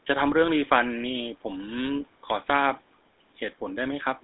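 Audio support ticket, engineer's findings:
Buzzy, gravelly speech the whole way through, clearly audible, consistent with a GSM full-rate codec, likely around 13 kbps. Passband runs roughly 200 Hz to 3.7 kHz, nothing above 3.9 kHz. Pulse-driven vocal-tract model, thinned excitation causes the roughness.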